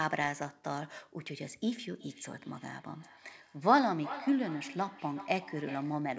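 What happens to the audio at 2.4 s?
Feedback echo between two devices runs from 1.96 to 6.07 s: sound returns at a fixed interval of roughly 0.4 s, up to about 14 dB below the speech, unlike reverb's smooth tail.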